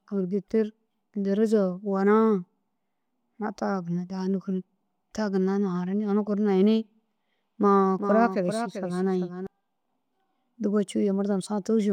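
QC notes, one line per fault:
7.99–9.47 s doubled audio track: a dry, full-band copy of the speech, about 10 dB quieter and roughly 400 ms behind, starts and stops abruptly; likely captured twice through a slower path.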